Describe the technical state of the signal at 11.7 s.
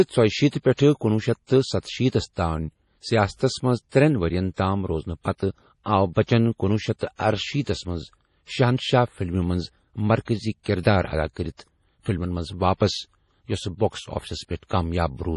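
At 11.7 s the speech carries heavy damage that is likely from MP3 compression, which fits a 32 kbps encode starved of bits. Nothing survives above 11.4 kHz, and weak detail flickers between frames, giving a watery, swirly texture with chirpy s sounds throughout the clip.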